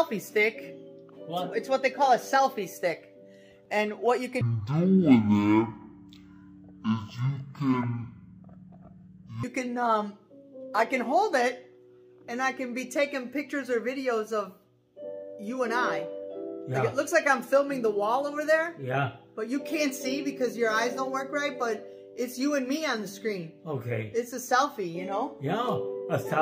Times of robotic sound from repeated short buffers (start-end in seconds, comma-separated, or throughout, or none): none